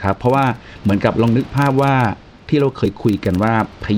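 A steady low buzz of fine ticks runs under the speech for the whole clip, repeating at about 23.4 Hz and growing louder and softer with the level of the speech. The room noise stays about 24 dB below the speech. This is a filter restarted on every block. The filter loses its memory at each block boundary and begins again from silence, so every block opens with a tiny transient. The tick rate fits a 2048-sample block.

At 2.85 s there is a brief glitch at the join, and the speech seems to lurch forward slightly. Compressed frames were skipped here. Roughly one 24 ms frame of the encoded stream was dropped, either because it was missing or because the decoder rejected it as damaged, so about 20 ms of audio vanishes.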